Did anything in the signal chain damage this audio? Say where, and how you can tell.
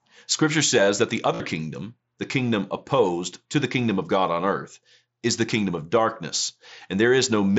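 Yes. The wireless link shows concealed Bluetooth headset packet loss from 1.35 to 1.40 s. A gap of about 52 ms, which fits roughly seven lost packets, is filled with a buzzy held tone. The receiver looped the best-matching recent waveform until real audio returned.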